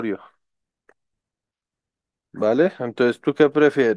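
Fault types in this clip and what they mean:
No faults detected in the speech; nothing here calls for a fault entry.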